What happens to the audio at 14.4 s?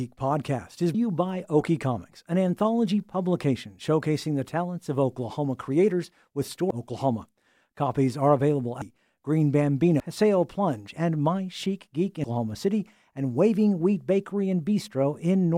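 At 14.4 s the speech plays through intact, with no audible fault at that moment.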